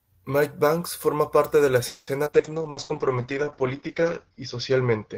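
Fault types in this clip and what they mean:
Call audio freeze: Right after "forma parte de la", at 1.87 s, the sound stops moving forward for about 200 ms. The last sound is held as a fading buzz or hiss. Then the speech carries on from where it stopped, so nothing is lost. A gap has simply been inserted. The likely cause is packets held up in transit, which left the jitter buffer empty. This also pushes the playback delay up by about 200 ms.
Skip ahead: Two small forward jumps follow the freeze, at 2.25 s and again at 2.38 s. Each one drops roughly 70 ms of speech and joins the two sides almost directly. Only a brief 10 ms patch covers each seam. This trims back part of the extra delay, roughly 50 ms each time.
Call bitrate drop: From 2.36 s to the end, the sound turns coarse and dull. The encoder's rate falls from 32 to 8 kbps, and it stays at its lowest for about 1.5 s. The audio bandwidth shrinks from 20 kHz to 8 kHz, so the top end goes missing. 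Fewer bits also mean rougher, watery coding. This happens because the call's bandwidth estimate dropped sharply.
Jitter buffer slow-down: Between 2.62 s and 3.45 s, the speech drags at about 94% speed, yet the pitch stays the same. The receiver repeats single pitch periods and slivers of pause to rebuild its reserve. In total it adds about 56 ms. Sounds stretch out slightly.
Burst of packet loss: Inside the slowed stretch, two short dropouts follow each other, at 2.71 to 2.80 s and at 2.83 to 2.92 s. In each one, about 60 ms of speech is gone. The receiver fills the hole by continuing the last sound as a buzz or hiss that fades away. Then the speech resumes further on, with the middle section missing.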